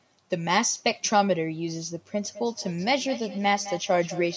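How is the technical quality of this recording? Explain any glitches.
The recording has one clear fault, a feedback echo between two devices. The speech passes through call microphone processing, with nothing above 8 kHz. From 2.2 s to the end, each word returns at a steady interval of roughly a fifth of a second. Two devices in the same room share the call. One plays what the other's microphone sent, and that microphone hears it again. Neither echo canceller removes the other device's playback. The repeats peak about 13 dB below the speech, and each pass sounds thinner and more ringing.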